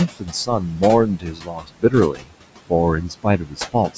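Noise suppressor artifacts run through the whole clip. The room noise sits about 13 dB under the speech, and the suppressor pulls it down by about 18 dB wherever it decides a band is just steady hiss. It works frame by frame, so the background dips between phrases and swells back underneath them.

The same processing also eats into the speech itself, which is the speech cut by the noise suppressor. It happens from 0.08 to 0.83 s, 1.06 to 1.94 s, 2.12 to 2.34 s and 3.02 to 3.97 s. Within those stretches the quieter parts get treated as noise and dropped by about 16 to 19 dB, adding up to roughly half a second, most of a second, a brief moment and under half a second respectively. Soft consonants and tails sound swallowed or ducked, all within the call's 8 kHz bandwidth.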